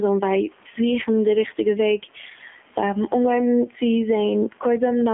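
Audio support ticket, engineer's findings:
Gain pumping, whole clip: gain swing of around 10 dB. Likely cause is input gain set far too high with a fast limiter or compressor clamping every peak. Dynamics squashed flat.

AMR narrowband mobile codec, throughout: speech band-limited to roughly 200 Hz to 3.4 kHz, nothing above 3.5 kHz. Plainly audible buzzy, synthetic coding from pulse-excited vocal-tract modelling, consistent with an AMR-NB mode near 7.4 kbps. Room noise, about 41 dB below speech, warbles through the codec.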